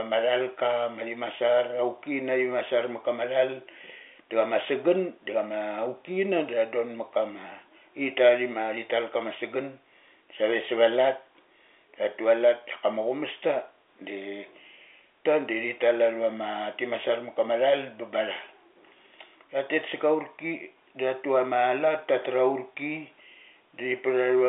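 No technical faults can be heard in this speech clip, which comes through a G.711 telephone line with nothing above about 3.7 kHz.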